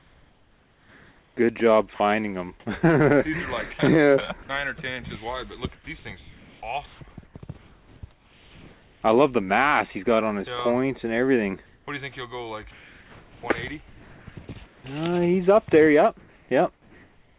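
From the start to 1.37 s the background is a smooth, featureless hiss, about 38 dB below the loudest sound and about 1 dB quieter than the real background that follows. This is comfort noise in place of the background, likely because the sender paused transmission during silence and the receiver synthesised shaped noise to fill the gap.

At 1.94 to 2.0 s and again at 4.43 to 4.49 s, the sound briefly vanishes into that same steady noise, losing about 40 ms and 60 ms. This is sound dropped by the voice detector, likely a quiet moment misjudged as background and not sent.

From 5.75 to 9.02 s the sound turns choppy, with edges and quiet parts repeatedly swapped for hiss, about 2.2 s in total. This is sound chopped by the voice detector, likely the sender toggling transmission on and off more than once.

Between 11.66 and 11.87 s, comfort noise in place of the background returns, now about 4 dB louder than the real background and about 39 dB below the loudest sound. 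The likely cause is the same pause in transmission.

The same chopping recurs from 12.71 to 14.84 s, with about 1.3 s replaced by steady noise. This is again sound chopped by the voice detector, likely from unstable sending.

From 16.19 s to the end, the background once more becomes uniform synthetic hiss. This is comfort noise in place of the background, likely from discontinuous transmission. Throughout, nothing is heard above 4 kHz, which fits the narrowband G.711 mu-law call codec at 64 kbps.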